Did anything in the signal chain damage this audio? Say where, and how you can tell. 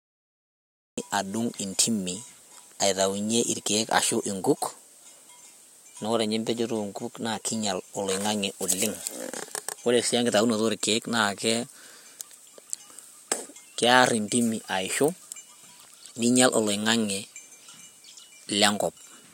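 Yes: a cut-off start, with digital silence from 0.0 to 0.98 s and the speech entering abruptly at 0.98 s. The damage sits at the capture stage, where the recording or stream began late. The signal appears mid-sound with no natural attack or fade-in. That tells you the first part of the utterance was never captured, rather than being quiet at the source, since nothing leads into it from the silence.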